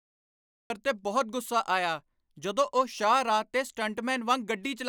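The clip opens with digital silence until 0.70 s. This is a cut-off start. Capture began late, mid-utterance. The speech then enters abruptly at "'ਤੇ ਬਹੁਤ ਗੁੱਸਾ", with no natural attack or fade. It sounds chopped, as if the sentence's beginning is missing.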